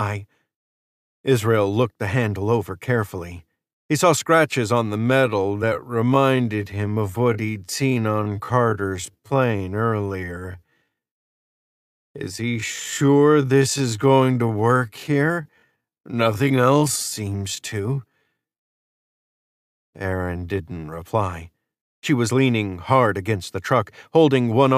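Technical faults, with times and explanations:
4.96–21.02 s, time-stretched section: speech abruptly slows to 0.596x speed at unchanged pitch and drags, likely from software repeating short segments to lengthen it.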